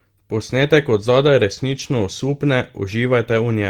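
At 0.61 s, and again from 1.71 to 1.81 s, the speech turns briefly rough and grainy with no dropout: a lost packet rebuilt from error correction. A coarse backup copy filled each loss, so unlike concealment nothing smears or repeats. The longer patch fits three lost packets.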